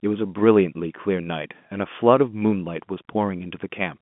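Nothing stood out on listening to this speech, which carries the narrow band of an ordinary telephone line.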